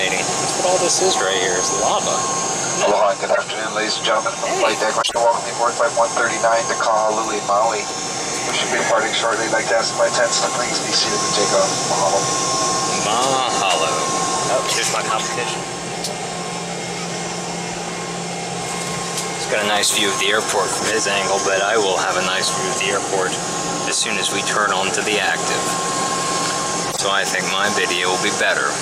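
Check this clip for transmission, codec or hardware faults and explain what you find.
Five short bursts of stray noise and chirping cut through the sound at 0.44–0.49 s, 3.29–3.38 s, 5.01–5.17 s, 20.72–20.82 s and 26.82–27.0 s. They peak at about −10 dBFS in the first and fourth and about −5 dBFS in the others. These are corrupt frames that were decoded anyway. Flipped bits in the compressed data made the decoder apply wrong gains or misread spectral codes, putting energy at the wrong frequencies. Each burst spans a few consecutive damaged frames, which is why it lasts from roughly 50 to 175 ms.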